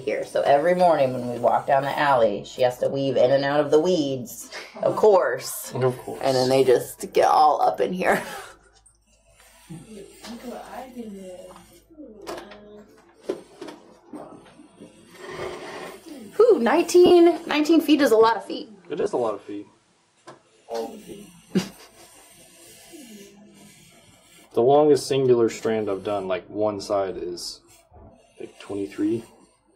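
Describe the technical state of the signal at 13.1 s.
At 13.1 s the signal is intact, with no fault present beyond the light, barely audible traces of the lossy compression it was stored with.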